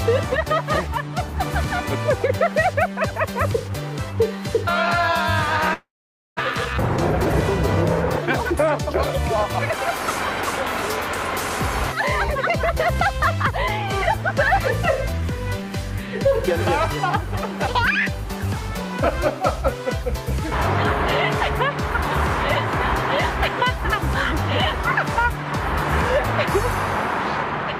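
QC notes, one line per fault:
5.73–6.41 s, long network dropout: The audio stops arriving. The last sound smears into a fading buzz, then about half a second of silence follows. It resumes with roughly 0.4 s missing. The likely cause is a lost stretch of packets, with playout delay shifting by around a fifth of a second.
6.96–7.34 s, 12.66–13.87 s, 15.12–16.52 s, 17.93–19.44 s, jitter buffer speed-up: The receiver trims pitch-period slices to shrink an oversized buffer. The first run plays at 122% speed, cutting about 0.1 s, and sounds clearly hurried. The later runs play at 102–103% and drop a few hundredths of a second each, so the pitch holds while the timing quietly tightens.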